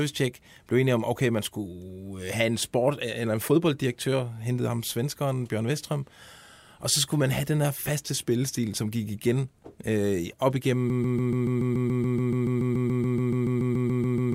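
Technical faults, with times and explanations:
10.9 s to the end: broken-record loop. Just after "op igennem", a 0.14 s fragment repeats exactly, back to back, about two dozen times, likely from a stalled player or stream resending its last buffer. Unlike a stutter, the identical cycles never resume; the following audio is lost.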